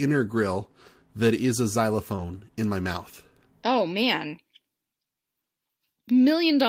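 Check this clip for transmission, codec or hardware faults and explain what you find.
Two packet-loss faults occur together in the speech, just after "grill that is a" and before "in my mouth".

Short concealed packet loss, 2.15 to 2.19 s: about 20 ms never arrived, so the decoder extended the preceding sound, leaving a brief smear or wobble.

Lost packet rebuilt from error correction, at 2.17 s: one 20 ms packet was restored from a low-bitrate copy carried by the next packet, so it sounds rougher and noisier.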